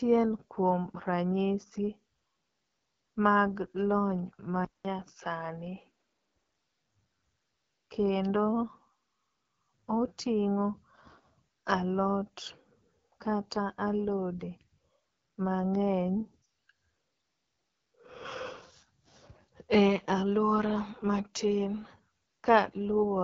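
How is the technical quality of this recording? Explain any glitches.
Technical quality is fairly poor: the whole clip has gone through a low-rate phone codec, and there's a brief patch where the input drops to a worse device.

Throughout the speech you can hear the AMR wideband (HD Voice) codec working hard. It's rough and raspy, with nothing above about 7.6 kHz, which fits AMR-WB at its 8.85 kbit/s mode. At that rate the vocal-tract model can't keep up, so detail gets smeared into grit.

From about 4.65 to 6.55 s it sounds like the input switched to a poorer device, likely a headset or secondary mic taking over. There's a 200 ms gap at the switch, then the sound goes duller, cut off above 6 kHz, with a faint new noise floor. The level stays roughly the same.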